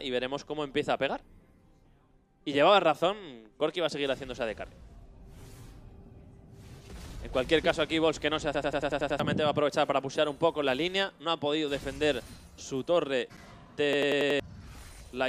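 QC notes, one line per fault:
8.55 to 9.20 s: system hang loop. A 93 ms slice repeats seven times at 10.8 Hz, a machine-gun stutter fitting a 4096-sample ring buffer replaying during a freeze, and about 0.7 s of sound is lost.
13.93 to 14.40 s: system hang loop. The same 93 ms slice length cycles five times at 10.8 Hz as playback stalls on one buffer, and roughly half a second of sound goes missing.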